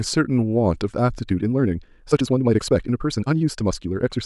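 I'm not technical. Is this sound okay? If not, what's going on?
No. There's a time-stretched section from about 1.22 s to the end of the clip. From that point the speech suddenly runs about 1.6 times faster, yet the pitch stays the same, so it sounds rushed rather than high and squeaky. This is likely software squeezing that stretch to fit a shorter length, cutting out tiny slices of sound to speed it up while keeping the pitch where it was.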